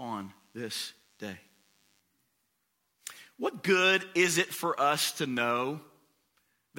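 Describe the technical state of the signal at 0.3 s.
A thin, steady buzz pitched at 100 Hz sits underneath the speech at 0.3 s, bright with a dense stack of harmonics and well below the level of the talker. It is DECT cordless phone buzz, running from 0.0 to 2.0 s: a nearby DECT handset or base fires a radio burst every 10 ms, and the audio circuitry rectifies those bursts into a pulse train at that rate.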